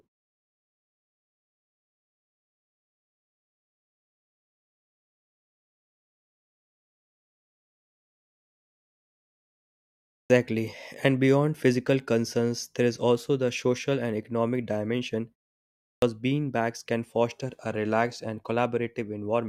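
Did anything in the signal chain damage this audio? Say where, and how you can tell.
Yes. At 10.11 s, after 10.1 s of silence, and at 15.83 s, between "social and economic dimension" and "beanbags can foster a", speech bursts in with its first 0.19 s missing. This is a clipped start after a pause: the playback device slept through the silence and woke late.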